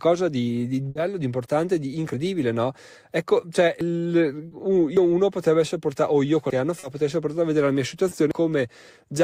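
Speech, marked by three kinds of transmission and capture fault. A burst of packet loss comes first, from 0.89 to 0.97 s. The receiver had nothing to play for about 60 ms. It stretched the last sound and let it fade, so the speech turns briefly into a held buzz or hiss. Then it picks up later on, and roughly 60 ms of real speech is gone. Five jumps in the sound follow, at 2.14, 3.81, 4.97, 6.50 and 8.31 s. There is no silence at these points. The speech simply skips ahead. Around a twentieth of a second goes at the first two. About a tenth goes at the last three. This is most likely a dropped buffer (overrun), where the hardware overwrote samples before the program collected them. Short concealed packet loss appears at 4.47 to 4.53 s, 6.79 to 6.85 s and 8.09 to 8.13 s. Each time a little audio arrived too late for the decoder. The receiver bridged the hole from the preceding pitch or noise and blended back in. 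Each patch is a brief smear or wobble. About 40 ms is covered at the first two and about 20 ms at the last.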